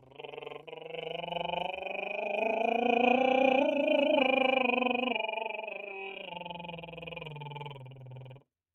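A noise suppressor built for speech is applied to the music throughout. It treats sustained tones and decay as noise, so the level swings by around 10 dB. Attacks pass while held material sinks, giving a pumping, thinned character.

Sound is cut by the noise suppressor from 0.0 to 0.88 s, dropping by up to about 12 dB, and again from 6.13 to 8.45 s, by up to about 13 dB. In both stretches, sustained passages and tails fade abruptly while transients survive.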